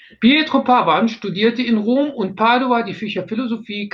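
No technical faults can be heard anywhere in the recording; the speech signal stays continuous and intact throughout.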